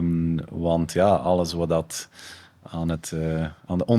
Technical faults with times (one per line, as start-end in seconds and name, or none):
none